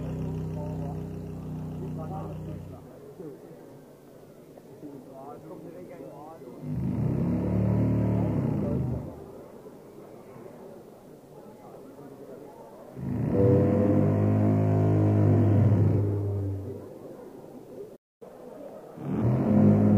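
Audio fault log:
17.95–18.22 s, playback stall: The audio cuts out mid-flow and the output goes completely silent for about 250 ms, a gap long enough to register as a hard dropout rather than a click. The likely cause is the player's buffer running dry, or its audio thread being blocked, so nothing was delivered to the output until it recovered.
18.22–19.22 s, catch-up at higher speed: Straight after the stall, the audio runs fast for about one second at 1.25 times normal speed, and its pitch rises by roughly four semitones. This is the player working through the backlog that built up during the silence. It resamples the buffered audio to win back the lost time, which raises speed and pitch together, and then drops back to normal rate.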